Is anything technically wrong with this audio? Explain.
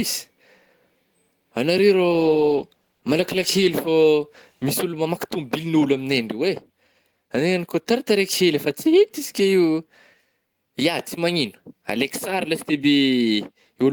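Yes. A call bitrate drop runs from 1.89 to 5.81 s. The encoder's rate falls, which fits a drop from roughly 32 to 15 kbps. It codes more coarsely, so the speech sounds rougher and duller, worst for about 1.6 s, before recovering.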